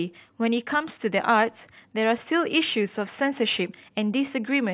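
No technical faults can be heard in this speech recording. There is nothing to place on a timeline.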